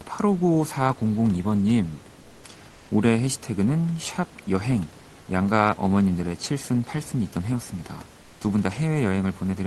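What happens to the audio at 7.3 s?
Nothing goes wrong at 7.3 s; the speech carries straight through that moment without a dropout, click or glitch.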